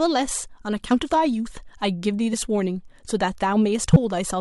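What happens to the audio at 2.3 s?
At 2.32 s, compressed frames are skipped: whole frames were missing from the file or rejected by the decoder as damaged. The speech jumps ahead by around 20 ms.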